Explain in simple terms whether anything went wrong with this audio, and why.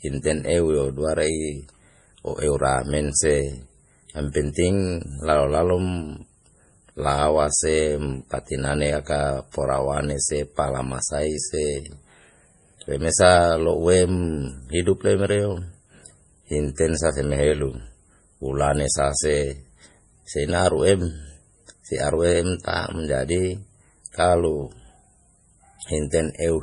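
Throughout, the speech sounds watery and swirly, with everything above 10.5 kHz missing. That is likely heavy MP3 compression dropping fine detail to save space.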